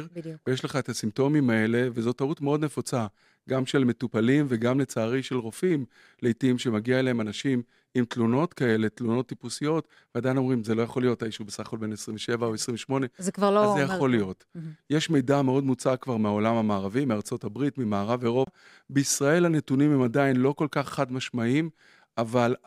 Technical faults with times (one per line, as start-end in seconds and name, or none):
18.45-18.47 CD skip